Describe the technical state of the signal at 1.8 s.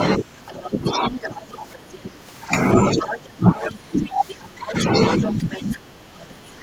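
At 1.8 s two overlapping faults are present. The first is the other side's voice leaking through, running from 0.46 to 2.11 s: a second voice sits roughly 10 dB beneath the talker, likely because the loudspeaker's output reached the microphone and the echo canceller failed to strip all of it. What separates this from ordinary crosstalk or background chatter is that it tracks the far end of the call, arriving as a leaked copy of it.

The second is speech suppressed in double talk, spanning 0.69 to 2.07 s. With both sides talking at once, the echo canceller likely could not separate the local talker from the echo and pulled the whole signal down, so the talker's voice dips by around 10 dB in pieces totalling a little under half a second. Unlike a dropout or packet loss, the voice sinks only while the other side speaks rather than vanishing at random.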